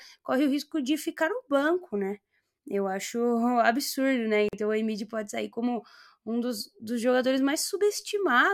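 At 4.49 s, right after "acho absurdo né", the speech drops into a 45 ms hole: a gap at a join of encoded pieces. The audio was evidently encoded in separate chunks, which fits 6-second pieces, and joined without trimming the encoder's start-up delay and final-frame padding. It sounds like a brief stutter, after which the speech resumes where it stopped. A spectrogram shows a clean vertical band of silence with slightly smeared edges, and the waveform shows a flat gap.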